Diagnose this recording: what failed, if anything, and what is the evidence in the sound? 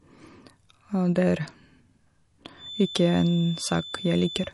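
Low-bitrate audio saved at a high bitrate, throughout, at the codec stage: the speech has nothing above 11.3 kHz and carries MP3 smearing. This likely comes from a 48 kbit/s MP3 later re-encoded near 280 kbit/s, which keeps the first encoding's losses and cut-off.

Feedback whistle, from 2.54 s to the end, in the analogue path between loudspeaker and microphone: a thin, steady 3.5 kHz tone sits roughly 15 dB below the speech and swells and fades slowly. The loop is likely held just at the edge of feedback, sustaining one frequency without growing.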